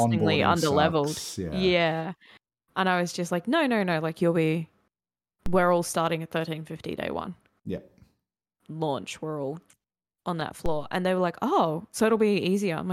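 A DC step occurs twice in this speech clip, at 5.46 s and again at 10.66 s, each heard as a single low thump while the speech carries on unchanged. At both points the waveform's zero line jumps suddenly by about -19 dBFS, then drifts back to centre as a roughly 2 Hz high-pass drains the offset away within a fraction of a second. The abrupt shift itself, not the speech, produces the thump.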